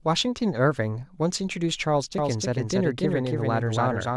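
Doubled audio track from 2.18 s to the end: a second full-band copy, about 5 dB quieter, trails by roughly 300 ms without room colour, likely from a slower parallel capture path.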